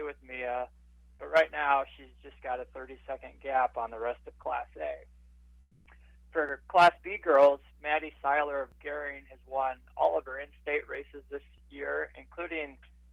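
From 5.61 to 5.85 s, comfort noise replaces the background: for 240 ms the real ambience, about 32 dB below the loudest passages, becomes a smooth, featureless hiss shifted by about 2 dB, likely from Opus DTX. Unlike a dropout, the gap never falls silent.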